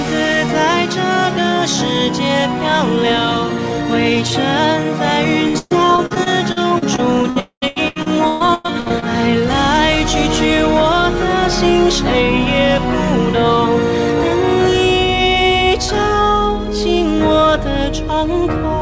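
From 5.48 s to 9.04 s the sound turns choppy and robotic, with a stuttering edge and small pieces missing. This is repeated packet loss (robotic sound): around two dozen short holes, the longest about 123 ms, were each patched by stretching the sound just before them, and the next hole arrived soon after. Roughly 30% of this stretch is patched-over material rather than real audio.

Inside that stretch, from 7.40 s to 7.64 s, there is a longer break where the sound smears into a fading buzz or hiss and then falls to silence for about 90 ms before resuming. The likely cause is a long network dropout: about 220 ms of audio never arrived, and the receiver could only extend the last sound briefly before running out. The audio returns without the lost portion, carried through the same call codec path, which fits G.722 and keeps nothing above 8 kHz.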